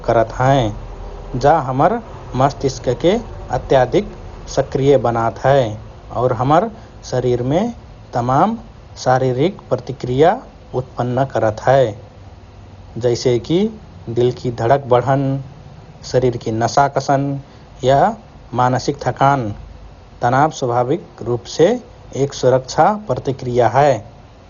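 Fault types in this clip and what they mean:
Dolby Digital compression: The speech sounds dull and muffled throughout, with a rough, fluttering grain around voiced tones. This is heavy damage from a low-bitrate lossy encode, likely Dolby Digital at a rate that fits something near 40 kbps. The encoder narrowed the band and left many frequency lines without bits, so they were filled with noise. On a spectrogram, energy stops abruptly at 6.9 kHz for the whole clip, with speckled, blotchy texture beneath.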